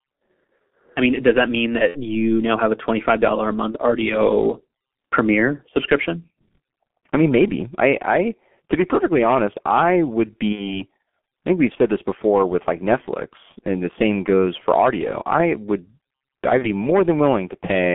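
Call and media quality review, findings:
G.723.1 codec, whole call: muffled, hoarse speech, smeared consonants. Spectrogram shows energy confined to roughly 150 Hz to 3.4 kHz, blocky 30 ms-frame smearing, blurred onsets. Low-rate coding near 6.3 kbit/s; slow model updates, heavy codec damage.

VoIP packet loss concealed by the speech codec, 1.88 to 2.02 s, after "mean does that mean", before "you now have a": stretched buzzy tone or coloured noise fading out. Fits about 60 ms lost. Waveform: repeated pitch cycles, decaying envelope.

Same concealment at 3.72 to 3.78 s, 10.52 to 10.84 s (after "perfectly honest I would"), 16.58 to 16.72 s. Decoder extrapolates the last pitch and filter, and the gain drops frame by frame. Spectrogram: frozen harmonics, then weak, distorted recovery.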